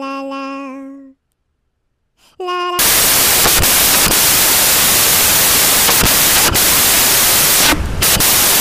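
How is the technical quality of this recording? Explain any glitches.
The recording has one serious glitch. Samples built from the wrong bytes, from 2.79 s to the end: each sample's bytes are combined wrongly, so the rapidly changing low bits become the dominant part of each value. It is heard as loud, harsh broadband noise, close to white on loud sounds.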